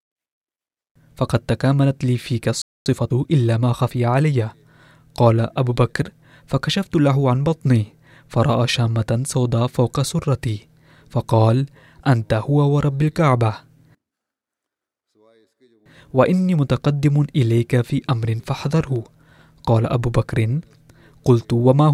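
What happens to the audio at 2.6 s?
At 2.62 s the speech cuts out for about 240 ms, until 2.86 s: a playback stall, likely the player running short of data or its thread getting blocked.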